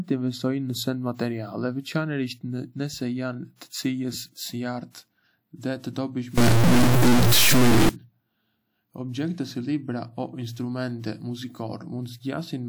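Between 6.38 and 7.89 s, this speech recording turns grainy or buzzy, with noise filling the gaps; the cause is likely a stuck bit corrupting sample values.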